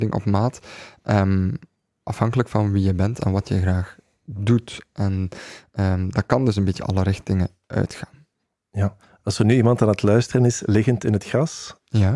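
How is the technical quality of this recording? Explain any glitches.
No technical faults are audible.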